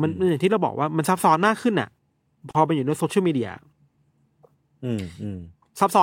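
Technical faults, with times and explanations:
2.51 to 2.55 s, gap at a join of encoded pieces: the speech drops out for about 38 ms with smeared edges, then resumes exactly where it stopped. Two separately encoded segments were joined untrimmed, leaving encoder start-up delay and final-frame padding in.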